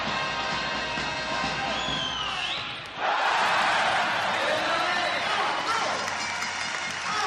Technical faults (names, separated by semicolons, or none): call bitrate drop